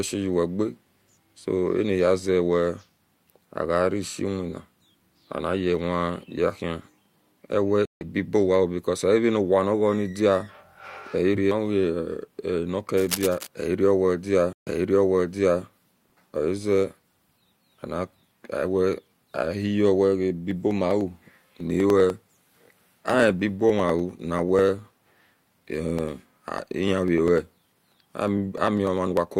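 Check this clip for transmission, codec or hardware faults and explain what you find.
Yes, there's trouble here: two stream reconnects, a burst of cable scratch noise, and a run of periodic USB or driver dropouts in this speech clip.

The stream reconnects hit at 7.85 to 8.03 s and again at 14.53 to 15.63 s, just after "ehiro owedia". Each time the link drops, the player goes quiet and a fresh decoder picks up mid-stream. The first gap is about 156 ms and comes back roughly a tenth of a second later. The second is about 138 ms, then repeats 960 ms already heard, as if the server resent a burst.

From 12.97 to 13.47 s, just before "ehiro owedia", there's a dense, uneven scratchy rustle sitting around 10 dB below the speech. That's likely cable scratch noise: a worn lead or connector being moved, with its contact resistance jumping about.

The periodic USB or driver dropouts start right after "ahiyo wega" and run from 20.51 to 29.27 s. 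Something blocks the bus or driver every 99.5 ms, and about half a millisecond of audio is skipped each time, around a hundred losses in all. They come through as a steady ticking under the speech.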